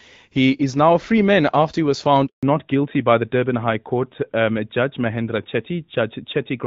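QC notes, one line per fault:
2.27–2.43 s, handover gap: The call was passed from one network to another, and during the switch no speech frames arrived for about 160 ms. The decoder had nothing to play, so the sound dies away within a few tens of milliseconds and leaves a hole of near silence until the new link starts delivering audio. Whatever was said in that window is lost and cannot be recovered downstream.
2.43 s to the end, fallback to narrowband: After the handover the call no longer ran on the HD Voice path. Before this point the lightly coded wideband sound fits AMR-WB at 12.65 kbit/s. Afterwards it dropped to an older narrowband codec, which points to AMR-NB at 12.2 kbit/s. Nothing above 4 kHz survives from here on, so sibilance dulls and air disappears and the audio turns duller, more boxed-in and rougher than the opening seconds.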